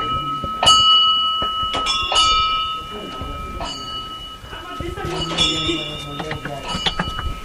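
No technical faults can be heard anywhere in this recording of sounds. The audio holds steady throughout, with nothing that calls for comment.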